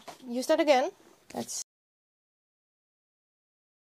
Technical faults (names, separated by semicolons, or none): audio dropout to silence